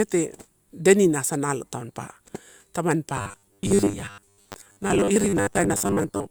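From 3.1 s to the end, the speech goes robotic, a stiff metallic buzz at 100 Hz that still loosely tracks the words. That's likely repeated short buffers, a 10 ms chunk looped to cover missing audio, with about half the sound replaced by repeats.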